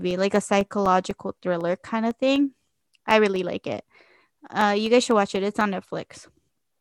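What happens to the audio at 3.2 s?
At 3.2 s the speech carries periodic USB or driver dropouts, running from 0.11 to 6.61 s. Every 0.25 s a blocked bus drops about a millisecond to silence. Regular ticks result.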